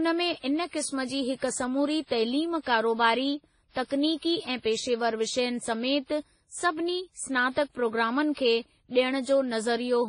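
From start to finish, the speech stops hard near 10.1 kHz. Two kinds of compression damage sit on top of each other, the artefacts of each codec heard together. The likely cause is transcoding between lossy codecs, which fits WMA 1 around 32 kbit/s followed by Vorbis around 25 kbit/s.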